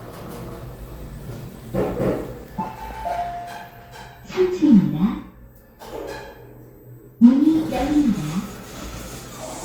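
At 3.69 to 3.73 s, a short stall from a late packet holds the sound about 20 ms, shown as a repeated stretch before resuming unchanged.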